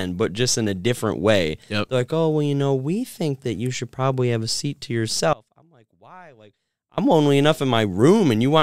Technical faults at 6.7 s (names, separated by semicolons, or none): audio dropout to a faint residue